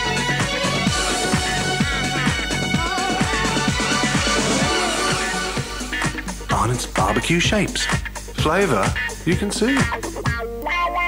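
No technical faults can be heard anywhere here.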